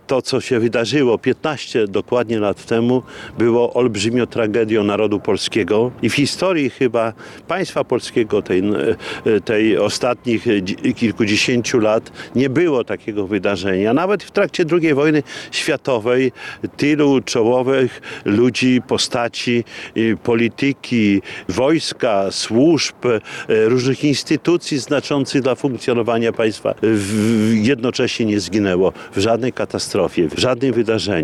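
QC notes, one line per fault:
Nothing stood out on listening.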